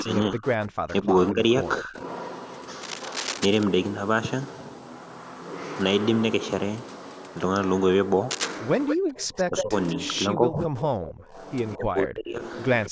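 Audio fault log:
0.00–2.04 s and 8.89–12.91 s, speech suppressed in double talk: the speech dips in pieces, falling by about 40 dB early on and about 30 dB later, roughly a second and two seconds in total. Both sides were likely talking at once, so the echo canceller turned everything down.
8.87–9.91 s, 11.71–11.77 s and 12.85–12.89 s, echo leak: a delayed copy of the speech trails it by 181 ms. It is strong in the first stretch, about 5 dB below the speech, and only faint scraps later, about 20 and 25 dB down. This is likely loudspeaker pickup that the far end's echo canceller failed to remove.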